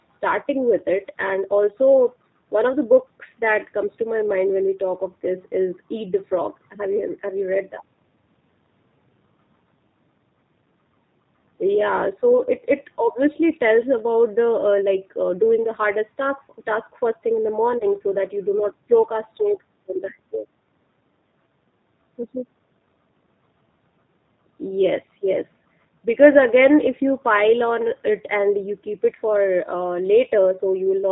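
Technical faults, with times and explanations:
throughout: G.729 codec. The speech is carried at 8 kbit/s by a coder that rebuilds each 10 ms frame from a vocal-tract filter, a pitch predictor and a handful of pulses, so it sounds plainly rough and slightly synthetic. The band stops at 4 kHz. On a spectrogram there is a hard flat top at 4 kHz, and the harmonics look smeared and grainy from frame to frame.
17.78–17.84 s: VoIP packet loss concealed by the speech codec. About 30 ms of audio went missing, which fits a single lost packet. The decoder filled the gap by repeating its last pitch and filter settings at falling gain, so the sound briefly turns into a buzzy tone or coloured noise that fades. Because each frame builds on the one before, the voice stays weak or distorted just after the gap. The waveform shows a dip in the envelope.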